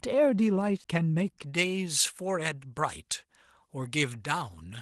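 At 0.84 s a CD skip cuts in: the laser has jumped to another turn of the disc spiral, so the player mutes very briefly, about 10 ms, and resumes at a different point in the speech. It sounds like a tick and an abrupt splice. On the waveform there is a tiny flat gap with mismatched edges, and the spectrogram shows a thin vertical click line.

From 1.44 s to the end, pre-emphasis is left on. The treble boost from a J.17 curve was never undone, leaving about 11 dB of extra level at 10 kHz relative to 1 kHz. The speech turns thin, bright and hissy on sibilants. On a spectrogram the upper bands suddenly brighten from that point on, and the waveform takes on spikier high-frequency detail.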